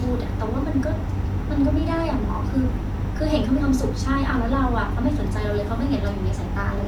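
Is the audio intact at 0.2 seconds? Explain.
Yes, at 0.2 seconds the audio is intact, with no fault audible at that moment.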